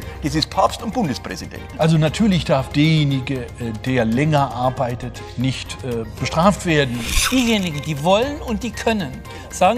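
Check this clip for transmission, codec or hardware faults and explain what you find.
Nothing here points to a transmission, codec or hardware problem; it's a clean listen with nothing to flag.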